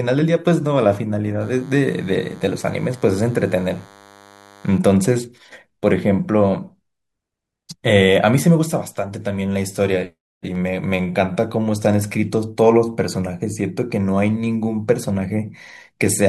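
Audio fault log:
1.41–4.78 s, DECT cordless phone buzz: a thin 100 Hz buzz well below the speech, roughly 30 dB down, from rectified 10 ms radio bursts; spectrogram shows evenly stacked harmonic lines.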